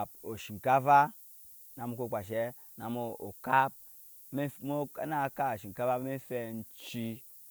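Speech runs the whole way through with low bit depth and noise shaping: an 8-bit signal whose rounding error has been pushed upward, leaving a steady, thin hiss only roughly 20 dB below the voice and climbing toward the top of the band, unlike unshaped truncation's grainy, level-dependent distortion.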